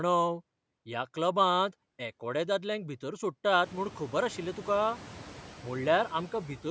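Noise suppressor artifacts run through the whole speech clip. The suppressor cuts steady noise by about 6 dB, so the residue dips between phrases and swells beneath them. After the room noise rises around three and a half seconds, this pumping becomes easier to hear.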